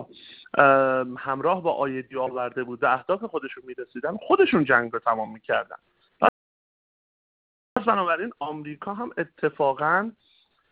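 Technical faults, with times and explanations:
6.29–7.76 s, playback stall: the sound just drops out for about 1.48 s mid-flow, then picks up again, likely the player starving for data or getting blocked.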